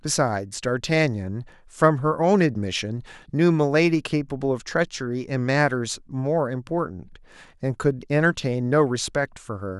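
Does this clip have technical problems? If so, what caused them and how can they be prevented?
No, there are no technical problems in this recording.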